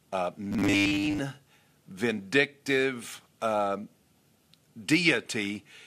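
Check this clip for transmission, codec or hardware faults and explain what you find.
The speech in this clip has two separate faults: a metallic buzz near the start and a short burst of burbling near the end.

From 0.45 to 1.20 s the speech becomes a rigid, metallic buzz at a fixed 100 Hz that still roughly follows the speech. The likely cause is robotic sound from repeated short buffers. Late-arriving audio is padded by looping 10 ms chunks, replacing most of the real signal.

From 5.44 to 5.59 s there is DAB burbling. Weak reception let bit errors, at a rate of around 0.15 percent, slip past error correction into the MP2 data, pointing to about ten damaged frames. Wrong samples put short blips of noise into individual sub-bands rather than a steady tone.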